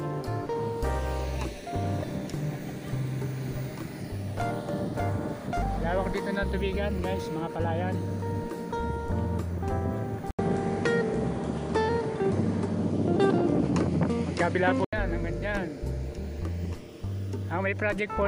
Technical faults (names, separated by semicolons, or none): input switched to a poorer device